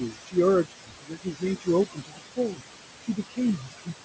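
Right through the clip you get noise suppressor artifacts: the room noise, sitting only about 7 dB under the speech, gets pulled down by about 21 dB between phrases and comes back underneath them.

The same suppressor also clips into the speech itself, cutting it at 0.01–0.37 s, 0.64–1.44 s, 1.86–2.62 s, 3.01–3.39 s and 3.58–3.94 s, with drops of about 20 to 22 dB. It treats the quieter bits as noise, so soft consonants and word endings sound swallowed or faint.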